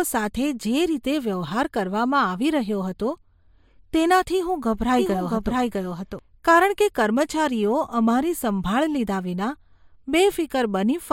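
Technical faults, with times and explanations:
4.99–6.19 s, doubled audio track: a second full-band copy of the speech trails about 0.7 s behind at about equal loudness, likely from a slower second capture path. Unlike an echo, it has no decay or room colour and starts and stops abruptly.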